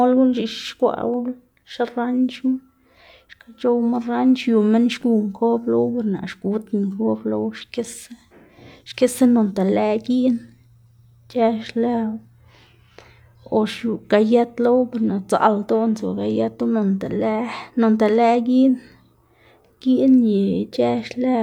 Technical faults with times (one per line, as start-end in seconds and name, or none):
none